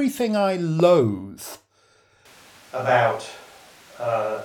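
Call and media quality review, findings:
Loud pop, 0.80 to 0.82 s: single sharp pop riding over the speech, peaking roughly 10 dB above it. Likely a plug, switch or static transient hitting the input.

Switch to a distant microphone from 2.26 s to the end: speech goes suddenly roomy and thin, level about the same, room noise up to about 25 dB under the speech. Likely the close mic dropped, falling back to a far one.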